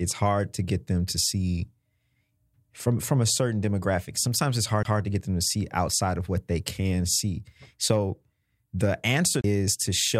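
The player's laser jumped to another turn of the disc's spiral twice. That is a CD skip: a brief mute of about 20 ms at 4.83 s before "to get them to", and about 30 ms at 9.41 s. Each is heard as a tick and a sudden jump in the speech.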